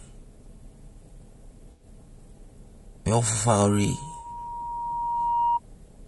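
All the way through, the speech has a rough, grainy texture, with noise filling the gaps between harmonics and a thin, slightly synthetic top end. That's likely low-delay AAC compression, probably AAC-ELD, and the damage is plain enough to fit a low bitrate around 32 kbps.

From 1.71 to 1.85 s there's a smeared, noisy patch where the decoder lost about 80 ms of audio and filled it in from the last good spectrum. That's AAC frame loss with concealment, and the gap points to a handful of dropped frames. A shorter one, about 40 ms, hits from 4.19 to 4.25 s and sounds like a brief phasey blur.

Starting at 3.49 s, a single tone at 947 Hz swells over roughly two seconds until it sits a few dB above the speech, then stops at 5.60 s. That's loudspeaker feedback squeal: the mic was picking up its own speaker, and the loop gain at that frequency went past one.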